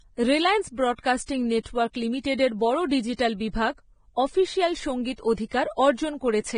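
Vorbis compression damage runs through the whole recording: the speech has nothing above about 9.7 kHz, and the treble that remains sounds hissy and grainy. The likely cause is heavy Vorbis encoding at a low bitrate, around 22 kbps. The encoder lowered its cut-off and quantised the upper residue so coarsely that fine detail was replaced by noise of similar energy. Consonants lose their crispness, attacks blur, and tonal parts of the speech take on a roughened texture.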